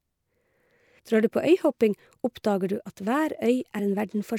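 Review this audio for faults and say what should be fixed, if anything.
Compressed frames skipped at 0.98 s and 3.78 s: speech jumps ahead about 150 ms, then 50 ms, fitting whole 26 ms frames lost. The spectrogram shows a smeared seam, not a click line. Prevent it with checksummed storage and verified transfers so no frames go missing or get rejected.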